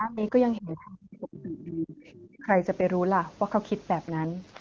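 The talker's speech dips from the start to 0.34 s, falling by roughly 15 dB, then drops much harder from 0.6 to 1.97 s, sinking by as much as about 35 dB and breaking up over roughly a second and a half. A brief dip of about 25 dB returns from 2.39 to 2.49 s. This is likely speech suppressed in double talk: with both ends talking at once, the echo canceller could not tell the near talker from loudspeaker echo and turned everything down.

Between 2.04 and 2.26 s a faint second voice slips in, sitting roughly 25 dB below the main speech, fleeting. This is likely the other side's voice leaking through. The far end played over the talker's loudspeaker, reached the microphone, and the echo canceller left a residue that carried on down the line.

From 4.08 s to the end at 4.6 s the speech turns rougher and more synthetic, with a buzzy, raspy edge, yet the bandwidth stays the same and nothing drops out. 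That is an AMR rate drop, and the change in texture fits the AMR-WB codec switching from 23.85 to 8.85 kbit/s. On a weakening radio link the network moves bits away from coding the speech and into error protection, so the speech model runs coarser until the rate recovers, which it does not do before the clip ends.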